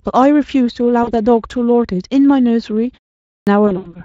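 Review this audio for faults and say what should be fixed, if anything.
VoIP packet loss concealed by the speech codec occurs at 1.03 to 1.12 s, where about 40 ms goes missing, which fits two lost 20 ms frames, and again at 3.67 to 3.99 s, where 120 ms is lost in bursts scattered over 180 ms, the longest run 80 ms. Each time, the Speex decoder repeats its last pitch and filter shape at falling gain, so the speech turns into a buzzy or noisy stretch that fades and stays thin just after. That smeared tail sets it apart from a plain dropout, which cuts to silence and recovers at once. To prevent it, use forward error correction or a deeper jitter buffer on the network path.

Clipped start after a pause occurs at 3.26 s, after a 0.36 s pause, when about 210 ms of the next phrase goes missing and the speech begins abruptly from silence without its opening sounds. To prevent it, keep the output device active through silence rather than letting it sleep.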